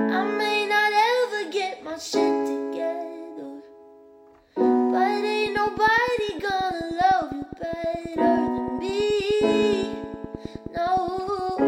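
From 5.46 s to 11.61 s a train of clicks runs over the sound: sharp, near-identical pulses at a steady 9.6 per second, around seventy in all, peaking roughly 5 dB above the programme level. Because the spacing is so regular and each click has the same shape, the cause is likely an external pulse source such as interference from nearby equipment or a faulty connection. It is heard as continuous ticking, audible through pauses as well.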